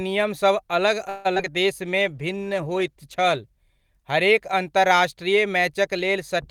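Right after "नियमसभ अलग", from 1.09 to 1.50 s, the speech turns choppy and robotic, broken by several short holes, the longest about 150 ms. This is repeated packet loss: packets kept going missing, and each gap was patched by stretching the preceding sound, covering nearly half the stretch.

From 1.82 to 2.68 s the speech drags, running at about 91% speed with unchanged pitch and drawn-out sounds. This jitter buffer slow-down comes from the receiver repeating small slices of audio to rebuild its reserve, adding roughly 80 ms.

Overlapping this, from 1.85 to 4.19 s, the speech becomes rough and muffled, at its worst for about 1.2 s. The sound points to a call bitrate drop, from around 40 to 16 kbps, after the bandwidth estimate fell and the encoder coded more coarsely and dropped high frequencies.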